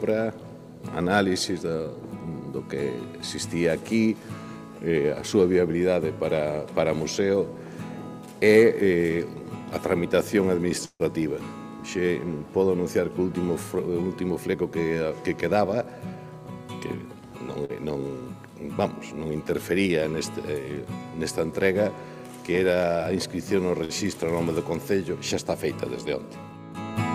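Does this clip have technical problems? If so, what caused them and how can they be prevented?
Yes. From 10.85 to 11.02 s there is a call audio freeze. The sound is held, fades into about 50 ms of silence, then resumes where it stopped. Packets were likely delayed until the jitter buffer ran dry. A steadier network path or a deeper jitter buffer would prevent it.

A jitter buffer speed-up runs from 13.75 to 14.81 s and again from 26.21 to 26.50 s. Playback runs at 113% with pitch unchanged, so the sound feels hurried. Short pitch-period slices were cut to drain a backlog, about 150 ms the first time and about 50 ms the second. Smoother packet delivery avoids bursts that overfill the buffer.

Short stalls from a late packet occur at 17.65 to 17.71 s and 23.85 to 23.92 s. The sound is stretched by 43 ms and 50 ms, then continues with nothing lost. Reducing network jitter or adding buffer headroom prevents these stalls.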